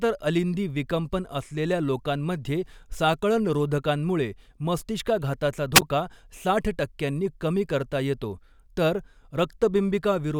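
Speech recorded through an analogue FM wireless microphone suffers a wireless microphone squelch dropout between 5.74 and 5.82 s, just after "असलेल्या लोकांमध्ये साकळणरोधकांमुळे मस्तिष्काघाताचा". The radio signal weakened enough for the receiver's squelch to close, so hiss briefly swells, the output then mutes into a near-silent gap of about 11 ms, and the sound comes back once the carrier recovers and the squelch reopens.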